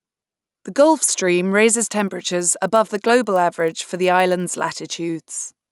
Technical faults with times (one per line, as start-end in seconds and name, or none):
1.76-4.80 resampler restarted on every block